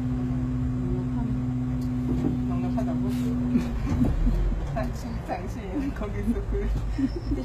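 HE-AAC compression runs throughout: the treble above the lower band is likely synthesised by spectral band replication, so upper harmonics fail to align, high detail turns gritty and metallic, and nothing remains above 14.9 kHz. The damage is plainly audible, which fits a bitrate around 20 kbps.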